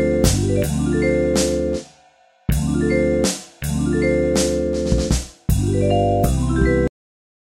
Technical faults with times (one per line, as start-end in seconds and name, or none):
6.88-7.57 cut-off end